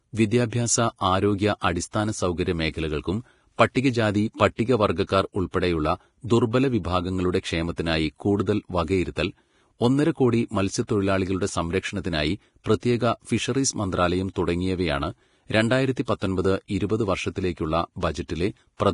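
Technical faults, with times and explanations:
Throughout: Vorbis compression, likely at a low bitrate, perhaps around 32 kbps. Nothing comes through above 10.6 kHz, and the treble left below that is so coarsely quantised that the fine detail has turned to grainy hiss. The speech sounds rough and smeared, with softened consonant attacks.
3.74 s: pre-echo, just after "ആരോഗ്യ അടിസ്ഥാന സൗകര്യ മേഖലകൾക്കും". A sharp attack sits late in a transform block, so the quantisation noise sized for it spreads back over the quiet moment before. That gives a brief hiss about 17 ms ahead of the onset, which sounds blurred rather than crisp.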